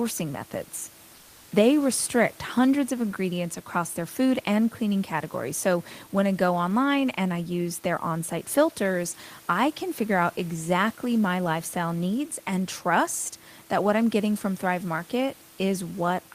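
A speech clip with room noise about 28 dB below the voice, it has comfort noise in place of the background from 1.15 to 1.51 s. For those 360 ms the real room noise gives way to a smoother synthetic hiss, only about 1 dB quieter. This is likely discontinuous transmission, as in Opus DTX. Unlike a dropout or noise gate, the pause is filled rather than silent, and its texture, not its loudness, gives it away.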